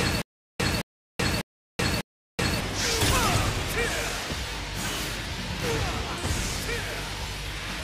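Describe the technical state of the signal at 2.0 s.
A short burst of about 218 ms keeps repeating, each time followed by about 380 ms of dead digital silence, so the same fragment returns every 0.6 s. This is a stutter with silent gaps, under way from the start through 2.61 s. The likely cause is a stalled player or stream replaying its last fragment at each retry before running empty, so the audio that belonged in those gaps is lost.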